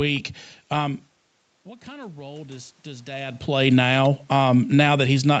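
From 1.63 to 3.49 s, the automatic gain rising fault appears: the level reaching the microphone fell by about 19 dB, and the gain control answered by slowly pushing its gain up, by about 7 dB over that span. Because the gain acts on everything the microphone picks up, the speech and the room noise behind it swell together over nearly two seconds, a gradual lift rather than a jump, following the drop when the talker moved back around 1 s.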